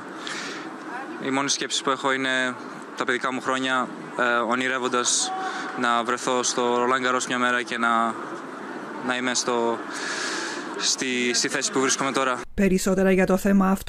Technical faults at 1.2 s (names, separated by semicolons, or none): none